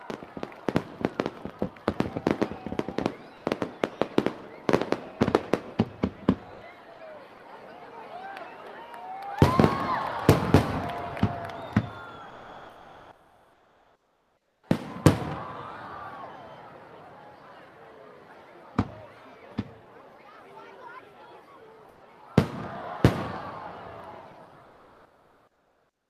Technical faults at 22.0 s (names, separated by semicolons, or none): sound dropped by the voice detector